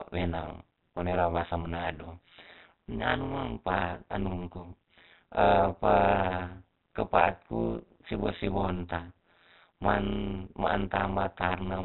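From start to end, overlap-add ripple: frames rejoin with uneven overlap gain, swinging the level about 60 dB around 150 times a second, a metallic buzz with extra tones over speech band-limited below 4 kHz.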